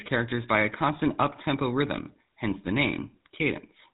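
From start to finish the speech has a buzzy, gravelly roughness and sounds dull, with nothing above 4 kHz. This is the GSM full-rate codec, which fits a 13 kbps stream. It models the vocal tract with sparse regular pulses, and the damage is plainly audible.

Right after "up tempo rhythm hence", from 2.64 to 2.68 s, the sound breaks into a brief squawk and gargle. These are GSM bit errors. Corrupted filter, pitch or gain values distorted the decoded spectrum and level for about 40 ms, roughly two frames.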